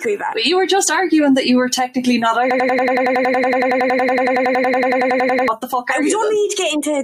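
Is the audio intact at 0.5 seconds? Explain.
No. At 0.5 s, as everywhere in the clip, a noise suppressor applied to music or sounds is at work. Tuned for speech, it treats sustained tones, ambience and reverb as noise and pulls them down by around 5 dB, while attacks slip through. Held sounds and tails sink and swell, giving a fluttering, thinned texture. Unlike a compressor's pumping, which follows loudness, the dips here track how steady the sound is.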